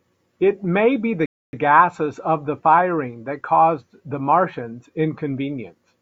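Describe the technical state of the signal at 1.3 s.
At 1.3 s the player is in a rebuffering stall: it has run out of downloaded audio and halts from 1.26 to 1.53 s while it waits for more. The speech drops to silence, then resumes exactly where it stopped, with nothing missing but 271 ms added.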